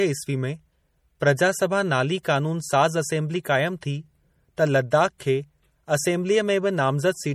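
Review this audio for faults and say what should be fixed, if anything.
MP3 compression runs throughout, likely from an encode at a bitrate that fits about 48 kbps. Weak frequency lines drop in and out between frames, so the speech sounds plainly watery and swirly, with nothing above 20.7 kHz.

Pre-echo comes from the codec spreading quantisation noise across a whole block ahead of sharp attacks. A brief hiss smears the onsets at 2.23 s and 3.43 s (17 ms each) and at 5.18 s (19 ms).

To prevent both, encode from the original at a much higher MP3 bitrate or use a lossless format, so the encoder has enough bits and can switch to short blocks for transients.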